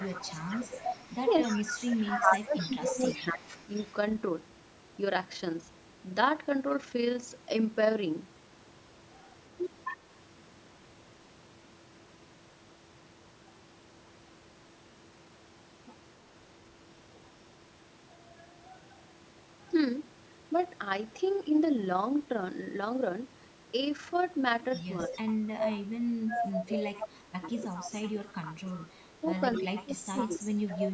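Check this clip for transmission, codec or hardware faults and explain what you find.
Two faults recur in this speech clip: echo leak and speech suppressed in double talk. Both point to a loudspeaker call. The band stops at 8 kHz, which fits ordinary call microphone processing.

Echo leak runs from 0.0 to 3.94 s, from 9.85 to 9.97 s, and from 24.72 to 30.87 s. A copy of the speech trails the original by 263 ms. The copy is about 10 dB below the speech in the first two spans and about 5 dB below in the last. The likely cause is a loudspeaker whose echo canceller left part of the sound in the microphone signal, which was then sent back.

Speech suppressed in double talk falls between 1.73 and 3.56 s, between 21.46 and 21.53 s, and between 25.08 and 30.5 s. The talker's level drops while the echo overlaps it. The deepest dips are about 20 dB, 5 dB and 25 dB. In total about 1.5 s is affected in the first span and about 3 s in the last. 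The echo canceller likely could not separate the talker from the echo, so it turned both down.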